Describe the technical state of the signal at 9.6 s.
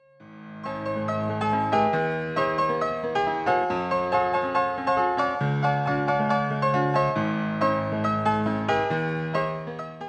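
A wrong sample rate runs throughout, consistent with audio recorded near 16 kHz being played back near 22 kHz, so at 9.6 s everything is 1.38 times fast and about 5.6 semitones high.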